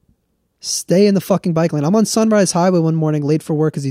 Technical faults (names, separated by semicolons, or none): none